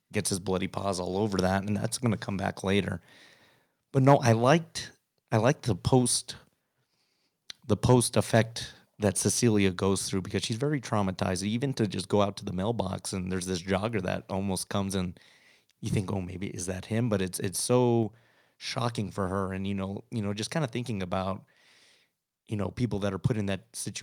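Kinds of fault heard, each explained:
Microphone overload: peaks at 4.08–4.32 s, just before "liked I liked the", and 7.89–8.39 s turn harsh and crackly, likely input gain driving the converter past full scale.
Microphone volume stepped down: at 18.03 s, between "it's it's" and "shocking for her and", the level suddenly drops about 3 dB, likely software lowering the input gain.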